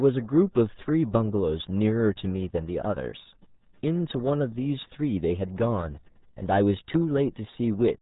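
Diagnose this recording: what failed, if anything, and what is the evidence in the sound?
The failure is at the codec stage: the speech has been through the RealAudio 14.4 codec for its whole length. Nothing passes above 3.8 kHz, so sibilants and consonant detail are gone and the voice sounds muffled. Heavy coding damage leaves a gargly, bubbling texture on every phrase, which points to a rate around 8 kbit/s. A speech coder at that rate models only a coarse spectral envelope, discarding the high band and fine structure.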